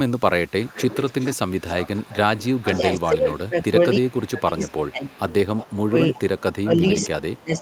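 From 0.65 to 2.79 s an echo leak trails the speech by 287 ms at about 15 dB below it, a faint delayed double of the speech. The likely cause is a far-end loudspeaker whose echo canceller let part of the microphone pickup return. On a spectrogram, each harmonic stack reappears as a weaker copy shifted 287 ms to the right. Further weak leaks follow the same delay: 3.3 to 3.49 s at about 30 dB down, 4.88 to 5.77 s and 6.83 to 7.07 s at about 20 dB down.

Speech suppressed in double talk runs from 2.6 to 5.21 s. The speech drops in pieces totalling around two seconds, at worst by about 20 dB, likely because the canceller could not separate the talker from the echo and attenuated both. The waveform envelope shows sudden notches. Briefer dips follow at 5.91 to 6.21 s, about 10 dB and roughly a tenth of a second in all, and from 6.62 s to the end, about 15 dB.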